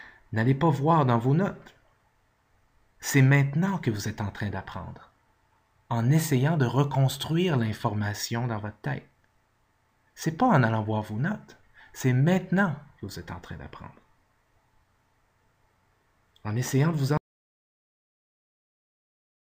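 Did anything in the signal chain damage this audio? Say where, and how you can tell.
Yes. An audio dropout to silence runs from 17.18 s to the end: plain silence, no room tone, likely a lost input while recording continued.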